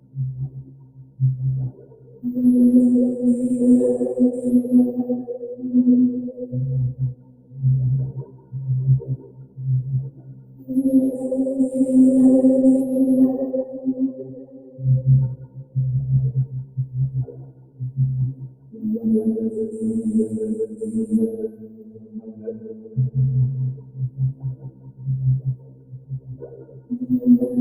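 Throughout the clip the sound keeps rising and sinking in level, with swings of around 20 dB, as steady parts and tails are pulled down while sudden onsets pass. A noise suppressor built for speech was left on, treating sustained, non-speech sound as noise.

Four stretches are hit harder: 0.00 to 2.24 s, 6.33 to 10.70 s, 13.78 to 18.83 s and 20.67 to 26.91 s. In each, sound cut by the noise suppressor drops by as much as about 14 dB. The affected portions add up to roughly one and a half, two, three and four seconds respectively, growing through the clip.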